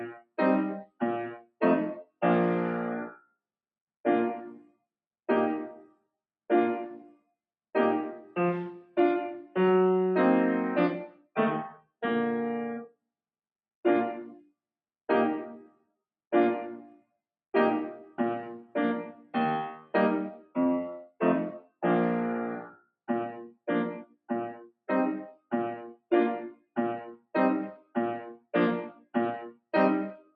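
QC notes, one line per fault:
1.40–1.55 s, sound cut by the noise suppressor: the suppressor mistook real sound for noise and pulled it down by about 22 dB, a dip rather than a dropout's silent gap.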